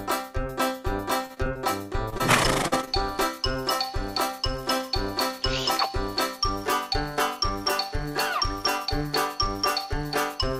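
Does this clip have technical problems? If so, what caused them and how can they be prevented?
Yes. From 1.25 to 2.22 s the audio turns choppy and robotic: repeated packet loss left eight gaps, the longest 46 ms. The receiver patched them by extending the preceding sound, so 150 ms was filled and 80 ms never arrived. A wired connection or a larger jitter buffer would prevent this.

Shortly after, brief smears appear at 2.68 to 2.74 s and 2.85 to 2.89 s. These are short concealed packet losses of 40 ms and 20 ms, filled by continuing the last sound and blending back into the real audio. Reducing network congestion and giving call traffic priority would prevent them.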